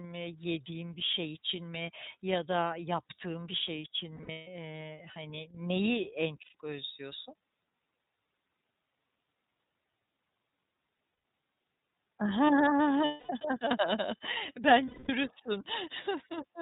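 The speech runs through the iLBC codec for the whole clip. The rough, slightly synthetic grain and the dull top, with nothing above 4 kHz, point to its 13.33 kbps mode with 30 ms frames. The codec damage is plainly audible as a coarse, slightly synthetic texture over every stretch of speech.

Lost iLBC frames come next, from 4.17 to 4.48 s. About 240 ms of audio is missing, scattered across 300 ms, with the longest unbroken gap around 150 ms. The decoder fills each hole by repeating the last pitch cycle mixed with noise, so the sound stalls into a held, buzzy vowel that thins as it goes. Shorter losses of about 120 ms follow at 6.42 to 6.55 s and at 11.12 to 11.24 s, each a brief frozen drone. Longer ones of about 240 ms fall at 13.05 to 13.31 s and 14.85 to 15.10 s, where the held tone fades before the speech returns. Each recovery is almost immediate, since every frame decodes without depending on the one before.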